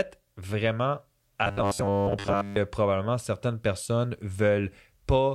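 Speech, with robotic sound from repeated short buffers from 1.44 to 2.57 s: a rigid 100 Hz buzz, likely from a repeating 10 ms segment standing in for most of the missing audio.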